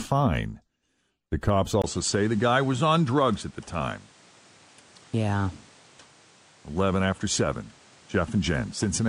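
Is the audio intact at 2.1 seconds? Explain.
No. From 1.82 s to the end, the input likely switched to a poorer device, cutting everything above 10.3 kHz so the speech sounds duller, with a new faint noise floor. A spectrogram shows a flat ceiling at 10.3 kHz, and the waveform shows a 20 ms gap at the switch.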